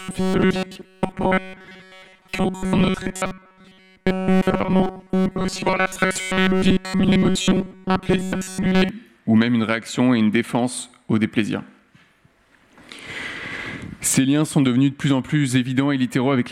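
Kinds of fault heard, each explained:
Robotic sound from repeated short buffers: until about 8.9 s the sound becomes a rigid metallic buzz at 188 Hz, likely from a roughly 5 ms segment looped over most of that stretch. A spectrogram shows fixed stripes at 188 Hz multiples, and the waveform shows identical repeating cycles.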